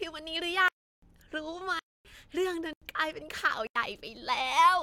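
Blocks of digital silence break up this speech recording four times: 0.68 to 1.02 s (341 ms), 1.79 to 2.05 s (256 ms), 2.73 to 2.82 s (85 ms) and 3.67 to 3.76 s (85 ms). At each one the signal cuts out and back with no fade. The lengths fit whole buffers of 16384, 12288 and 4096 samples at 48 kHz, the sign of output buffers not filled in time. Hard clipping follows from 4.59 to 4.68 s, where the level is driven about 2 dB past what the chain can pass. The peaks are sliced flat, and the squared-off tops add high harmonics, heard as a brief crackle on that loud stretch.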